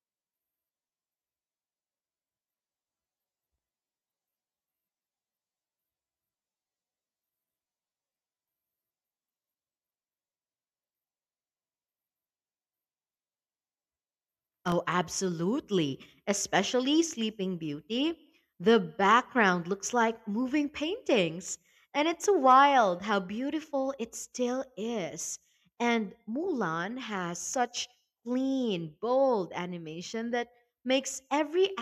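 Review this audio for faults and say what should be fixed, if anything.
Buffer tearing runs from 0.0 to 14.7 s of the speech: a steady robotic buzz at 46.9 Hz, which fits a 1024-sample buffer. Writer and reader pointers cross each period, splicing a small slice of audio from one lap earlier, about 40 ms old, between two hard joins. To prevent it, keep the write pointer safely ahead of the hardware read position, with enough headroom that scheduling delays can never let them meet.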